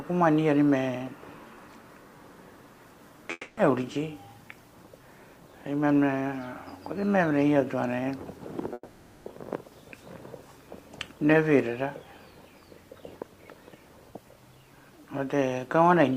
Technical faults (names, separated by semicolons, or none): long network dropout